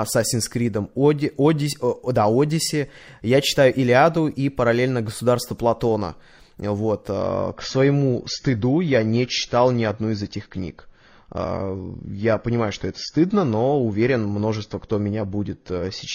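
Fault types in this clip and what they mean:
Adaptive stream at a lower bitrate: the stream switches down to a leaner version at 7.2 s and stays there until the end. The switch is abrupt with no gap, and from then on there's nothing above about 6.9 kHz, so the speech goes dull as coding artefacts rise. That sound fits a step from roughly 96 kbit/s down to around 24 kbit/s AAC after the connection slowed.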